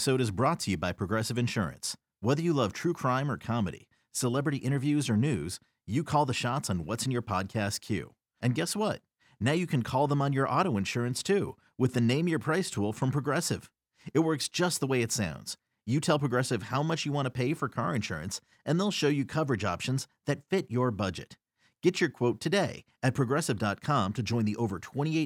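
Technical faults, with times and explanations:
No technical faults can be heard in this speech recording. There is nothing to list with a time or an explanation.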